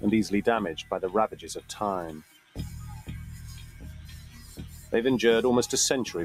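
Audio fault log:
Throughout: noise suppressor applied to music or sounds. A speech-oriented suppressor treats steady and decaying sound as noise, so level swings by around 15 dB and the sound pumps, flutters or thins out.
2.19–2.56 s and 3.64–4.92 s: sound cut by the noise suppressor. Sustained or fading sound is pulled down further, by about 11 dB and about 9 dB respectively.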